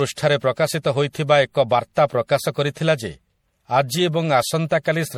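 From start to finish the speech carries generation loss. It sounds swirly and hollow, with a watery smear over the voice. Consonant attacks are blurred rather than crisp. Nothing is heard above about 18.6 kHz. The damage is heavier than a single MP3 pass would leave, which fits a 64 kbit/s MP3 chain likely run around four times. Each re-encode quantised the audio again on a shifted frame grid, so the noise and spectral holes piled up.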